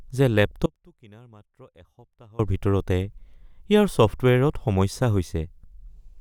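At 0.66 s the speech cuts out abruptly and only a faint trace remains until 2.39 s, an audio dropout to a faint residue lasting about 1.7 s. The leftover sound sits roughly 25 dB below the normal level. The likely cause is a break in the wanted signal while the downstream path stayed live. On a waveform the envelope collapses to a thin band with vertical edges. A spectrogram shows a sharp-walled, nearly empty block instead of a gradual fade.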